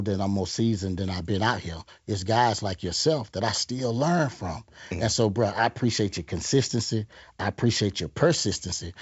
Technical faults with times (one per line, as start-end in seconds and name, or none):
none